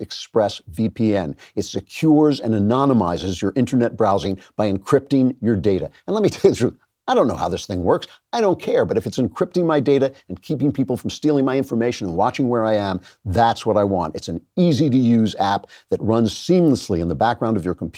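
No technical faults are audible.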